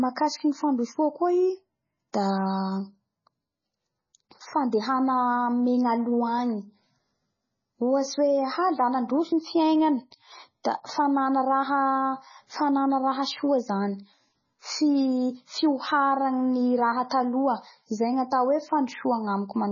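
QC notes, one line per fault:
Throughout, likely MP3 compression at a very low bitrate, fitting about 16 kbps: nothing above 7 kHz, heavy watery swirl, and smeared attacks in the speech.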